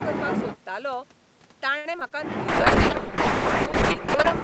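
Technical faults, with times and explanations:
1.77–2.12 s: repeated packet loss (robotic sound). Four short holes open within about a third of a second, the longest about 70 ms. Each is patched by stretching the preceding sound forward, so about 110 ms is synthetic continuation while about 60 ms simply drops out. With roughly 31% of the stretch concealed and the patches following one another so closely, the speech turns choppy, with fragments missing.
2.49–4.38 s: call bitrate drop. From 2.49 s to 4.38 s the speech turns coarse and watery, and the roughness holds steady for about 1.8 s at its worst. The encoder has been forced onto far fewer bits, which fits a fall from around 48 kbps to about 6 kbps in an Opus stream. With so little data, fine spectral detail is quantised crudely, and that is the smeared, gritty texture heard until 4.38 s.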